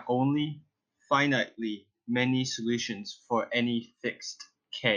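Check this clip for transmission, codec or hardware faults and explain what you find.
Nothing here sounds off: I couldn't hear any transmission, codec or hardware trouble anywhere in the speech.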